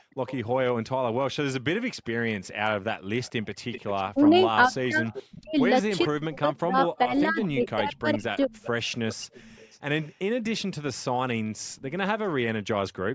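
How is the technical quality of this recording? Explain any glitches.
The recording has two call-processing faults: a recurring echo and, inside the longer echo stretch, dips in the main talker's level.

Echo leak, 0.00 to 0.38 s and again from 2.44 to 10.62 s: a faint delayed copy of the speech trails the original, about 20 dB quieter, lagging by 433 ms at first and 387 ms later. The likely cause is a loudspeaker-side echo canceller that let part of its microphone pickup return down the line. On a spectrogram, each syllable's harmonic pattern reappears as a weaker ghost shifted right by roughly 0.4 s.

Speech suppressed in double talk, between 4.14 and 8.52 s: while both sides are active, the main voice drops out in pieces, totalling around 2 s, with the deepest cuts reaching around 35 dB. The canceller likely could not tell its own talker from the returning echo and attenuated both. The waveform shows sudden notches in the envelope, and the spectrogram shows vertical gaps where energy, especially the upper band, collapses. 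Energy stops at 8 kHz throughout, consistent with the call's microphone path.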